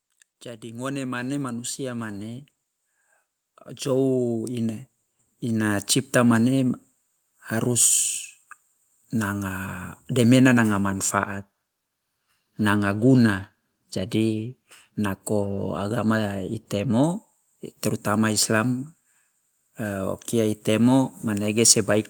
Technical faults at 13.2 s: none

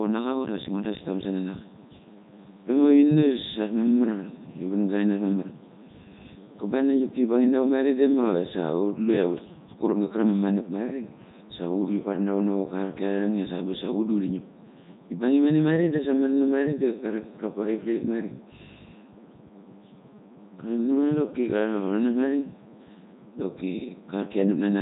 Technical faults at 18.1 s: Codec 2 vocoder

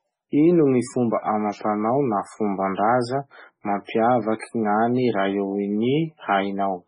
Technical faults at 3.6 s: MP3 compression

